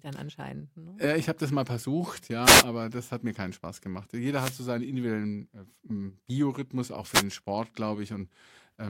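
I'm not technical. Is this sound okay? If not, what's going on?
No. There are three brief wireless microphone noise hits, at 2.43 to 2.65 s, 4.33 to 4.61 s and 7.11 to 7.24 s. Each is a quick swish of static. The radio link from the microphone weakens for a moment, and receiver hiss briefly rises.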